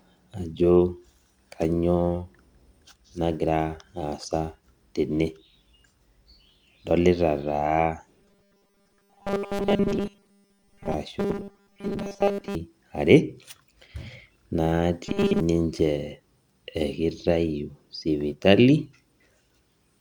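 From 8.19 to 10.94 s, 11.20 to 12.55 s and 15.06 to 15.40 s, the speech turns into robotic sound from repeated short buffers. A rigid 200 Hz buzz is imposed. The likely cause is 5 ms blocks being replayed while most of the real audio is skipped.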